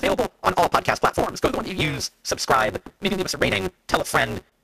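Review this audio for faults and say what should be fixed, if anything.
A steady buzz at about 188 Hz runs under the speech for the whole clip, and the speech moves noticeably fast, about 1.88 times normal speed, while its pitch stays roughly where it should be. This is a block size mismatch (truncated). One stage writes longer blocks than the next stage reads, and the tail of every block is dropped. The buzz comes from those cuts repeating at the block rate, and the 188 Hz rate fits a 256-sample read. Discarding part of each block shortens the timeline without resampling, which is why the speech speeds up but the pitch holds. To prevent it, the writing and reading stages should be set to the same block size, or given a buffer that passes on every sample between them.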